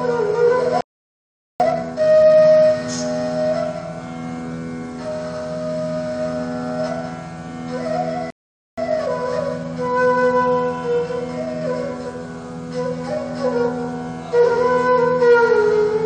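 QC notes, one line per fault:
0.81–1.60 s, playback stall: the player likely ran dry of buffered data or had its output thread blocked, so the sound cuts off mid-flow and goes silent for about 0.79 s before resuming.
1.60–2.38 s, time-compressed catch-up: to clear the backlog from that stall, the player removes small slices and cross-fades the joins, running at 2x speed, so the audio rushes by at normal pitch.
8.30–8.78 s, playback stall: output halts again with a silent gap of about 0.47 s, likely from another buffer underrun or blocked playback thread, before the sound picks back up.
8.78–11.78 s, time-compressed catch-up: a gentler recovery at 1.1x speed trims short pieces over three seconds, so the audio sounds slightly hurried at unchanged pitch.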